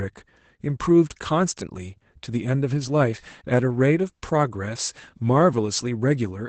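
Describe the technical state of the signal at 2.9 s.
At 2.9 s the speech carries Opus voice compression, present across the whole clip rather than at this moment alone. The sound points to the SILK linear-prediction coder at a low rate, around 12 kbps, running wideband: nothing survives above about 8.8 kHz, so sibilants lose their air. The excitation is coded coarsely, which makes the voice plainly muffled and hoarse, with a faintly robotic edge.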